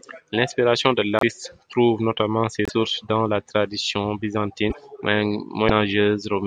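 Broken MP3 bit reservoir glitches occur at 1.19 to 1.23 s, just before "trouve notamment ses"; at 2.65 to 2.71 s, between that phrase and "dans la tradition"; at 4.69 to 4.75 s, right after "dans la tradition"; and at 5.68 to 5.70 s. Each is a brief chirp, burst of noise or short hole where the speech lurches forward. The likely cause is missing frames. The next frame then reaches back for borrowed bits and decodes another frame's bytes as garbage. The frames are 24 ms long.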